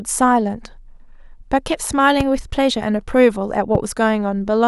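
Two loud pops land in the speech, at 2.20 to 2.23 s and at 3.75 to 3.78 s, each a single sharp hit about 10 dB above the talking, which carries on underneath. They're likely voltage spikes from a switch, plug or static getting into the signal.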